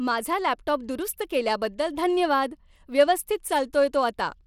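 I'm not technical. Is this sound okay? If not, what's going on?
No. The speech seems to have passed through a Bluetooth link that squeezed it hard, most likely with Bluetooth SBC compression, a simple codec that shares out too little data. The finest treble is gone, and a gritty, rough edge rides on the speech throughout.

There are also two tiny clicks, at 0.69 s and at 1.89 s, the second just before "धन्यवाद व्यवस्थित". These are likely dropped samples, where a couple of sound measurements went missing, so the sound jumps abruptly. Each is heard as one sharp tick.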